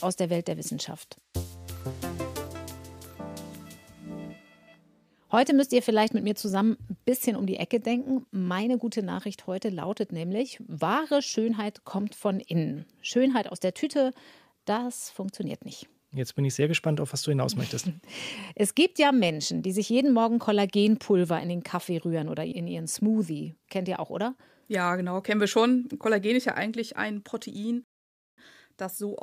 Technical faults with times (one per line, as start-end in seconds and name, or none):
27.84-28.38 rebuffering stall